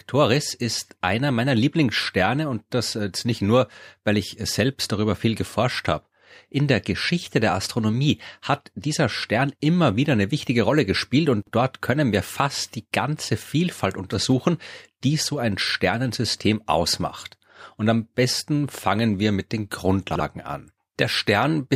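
At 11.42 to 11.52 s and again at 20.11 to 20.20 s, there's a brief jumbled stutter: chunks out of order. A roughly 46 ms block plays one slot late, swapping places with its neighbour and leaving three hard joins.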